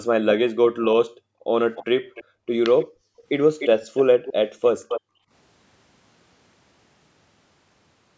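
From 1.1 to 1.47 s the background is gated by the echo canceller, dipping by about 40 dB while it suppresses the microphone. At 1.76 to 2.24 s a faint copy of the speech returns 299 ms late, likely an echo leak from an incompletely cancelled loudspeaker path. More gating follows at 2.24 to 2.48 s, then a brief echo at 2.79 s, gating at 2.86 to 3.26 s, and louder, more intrusive echoes at 3.59 to 4.33 s and 4.64 to 5.01 s. A final gated drop runs from 5.01 to 5.31 s. The call's microphone processing caps content at 8 kHz.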